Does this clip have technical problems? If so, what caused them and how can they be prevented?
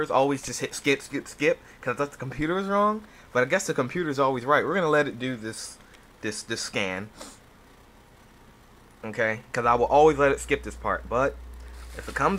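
Yes. Mains hum enters at 9.66 s and continues to the end at 12.38 s. It is a steady low tone at 60 Hz with some low harmonics, sitting about 15 dB below the sound. The power line is leaking into the signal path, through a ground loop between connected devices or through magnetic coupling from a nearby transformer. To prevent it, power all equipment from one grounded outlet, use balanced cables or a ground-lift isolator, and route signal leads away from power supplies.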